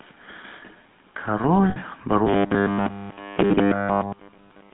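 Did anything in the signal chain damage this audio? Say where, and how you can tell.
Yes. At the codec stage, the whole clip has GSM full-rate codec damage. The band runs from 200 Hz to 3.6 kHz, with buzzy, gravelly roughness that fits 13 kbps coding.

Lost GSM frames hit the network-to-codec path from 1.70 to 1.77 s. A 60 ms gap is held as a metallic ring, consistent with three concealed frames.

From 2.27 s to the end there is robotic sound from repeated short buffers. A rigid 100 Hz buzz replaces most of the audio. The likely cause is a driver or buffer repeating 10 ms chunks.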